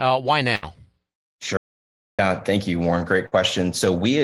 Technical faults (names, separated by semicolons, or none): burst of packet loss; audio dropout to silence